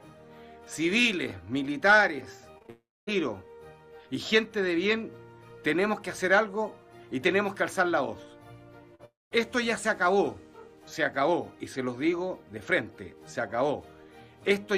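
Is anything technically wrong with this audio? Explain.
Yes, there are network-related faults in a few places.

From 2.51 to 2.70 s there's repeated packet loss with a robotic sound. Four gaps land close together, the longest about 47 ms, and more than half that stretch is the receiver papering over holes by extending the last sound. It comes out choppy, with pieces missing.

Right after, from 2.70 to 3.09 s, there's a long network dropout, with nothing usable arriving and about 380 ms of audio lost. The concealment holds the last sound as a fading buzz or hiss, then about 250 ms of near-silence before the audio resumes. The same thing happens from 9.05 to 9.33 s, with about 260 ms missing and roughly 190 ms of that going quiet. Both gaps are likely a break in the network stream.

Just before that, from 8.95 to 9.01 s, there's a short concealed packet loss. About 40 ms never reached the decoder in time, so the receiver stretched the preceding sound across the gap and blended back in. 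It comes through as a quick smear or wobble.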